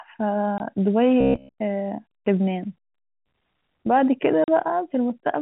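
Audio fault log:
0.58–0.60 s and 4.44–4.48 s, packet loss filled with silence: the sound drops out abruptly, first for 20 ms and then for 40 ms. Audio was lost in transit and the receiver put pure silence in its place. The lengths point to one and then two 20 ms packets. The hard cut to silence and back leaves each gap with sharp edges.
1.21–1.60 s, robotic sound from repeated short buffers: for about 0.4 s the sound turns into a stiff, metallic buzz near 67 Hz. It still loosely tracks the rise and fall of the audio but loses its natural texture. The likely cause is audio arriving too late, with the playback filling the wait by looping the last short buffer. A 67 Hz buzz fits a repeat every 15 ms, and most of the real audio in this span seems to be skipped.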